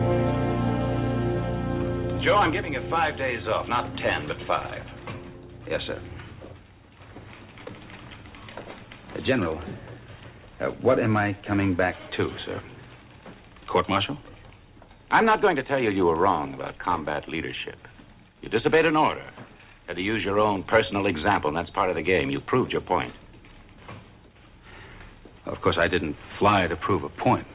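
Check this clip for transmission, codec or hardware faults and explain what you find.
I found no faults in this clip.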